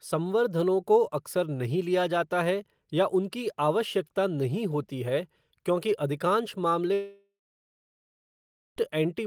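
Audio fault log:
6.93–8.78 s, long network dropout: right after "होती है क्योंकि अधिकांश" the speech breaks off, and about 1.84 s of audio never plays. The receiver extends the last sound into a brief buzz or hiss that decays, followed by roughly 1.43 s of silence, filling about 1.83 s in total. Speech resumes at 8.78 s with the missing stretch skipped rather than delayed. The likely cause is a stall in packet delivery that lasted long enough for loss concealment to give up and mute.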